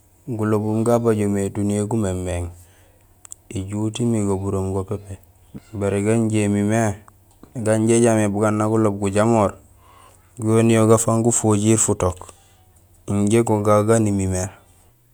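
No technical faults are audible anywhere in the speech recording.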